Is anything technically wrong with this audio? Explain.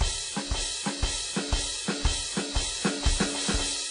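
Yes. WMA compression, likely the cause, runs through the whole music clip. A transform codec at a low bitrate, around 32 kbps by the sound of it, coarsely quantises long blocks, so its noise smears across tens of milliseconds and weak spectral lines are zeroed. Nothing is left above about 10.1 kHz, giving a dull top end, and the damage is plainly audible: a ringing, washy quality with hiss that breathes along with the music.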